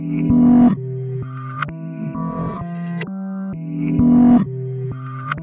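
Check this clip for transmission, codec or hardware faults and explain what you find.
Nothing stood out on listening to the clip.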